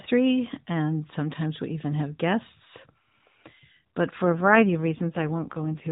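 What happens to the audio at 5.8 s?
At 5.8 s the speech sounds rough, buzzy and synthetic, though the band stays the same narrow telephone width with nothing above 4 kHz, and there is no gap or dropout. This is an AMR rate drop, running from 4.24 s to the end of the clip. The mobile codec has switched to a much lower bitrate, which fits a fall from the 12.2 kbps mode to the 4.75 kbps mode. It has fewer bits to model each frame, so the voice loses detail and takes on that artificial buzz.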